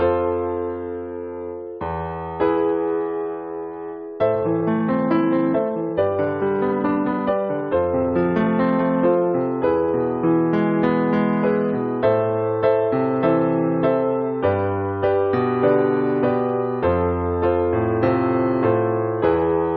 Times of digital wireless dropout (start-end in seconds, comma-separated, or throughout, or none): none